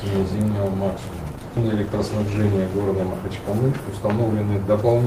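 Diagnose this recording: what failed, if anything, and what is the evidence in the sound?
A call bitrate drop in the codec stage, driven by the network's bandwidth estimate, runs from 1.37 s to 3.49 s. The sound turns coarse and muffled there, bottoming out for about 1.05 s before recovering. That fits the encoder being pushed from around 32 kbps down to around 14 kbps and quantising more crudely. On a spectrogram, the upper band thins and is cut off across that span, with blotchier texture below; the waveform shows little change.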